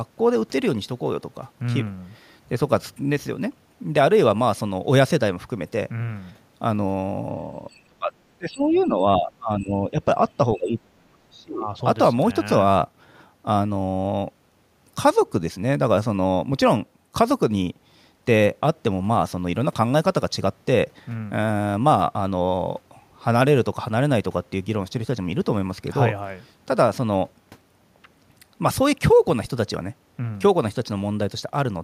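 At 7.7 s a faint scrap of the other side's voice leaking through appears, with another brief one at 8.74 s. This is likely residual loudspeaker echo the canceller missed. It adds a second voice underneath instead of taking anything away from the talker.

Speech suppressed in double talk runs over the same stretch, from 7.7 to 8.13 s, 8.37 to 9.99 s and 10.56 to 11.68 s. The canceller likely mistook overlapping talk for echo. The talker's own voice sinks sharply, very deeply at first, more mildly in the middle span, then deeply again.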